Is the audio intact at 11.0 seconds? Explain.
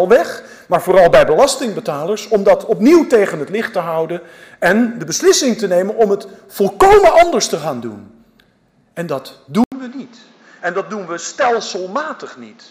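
No. From 9.64 s to the end, an 80 ms gap is followed by duller, boxier sound. Nothing remains above 7.5 kHz. The level falls roughly 10 dB, and a new, faint noise floor appears. The likely cause is an input switched to a poorer device.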